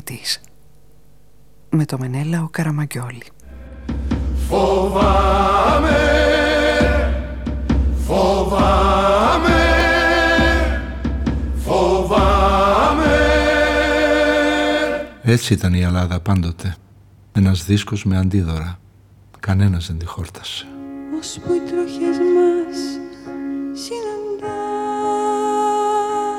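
At 9.80 s there's a block of digital silence, about 0.73 ms long, which fits a dropped 32-sample block. It's heard as a single sharp tick.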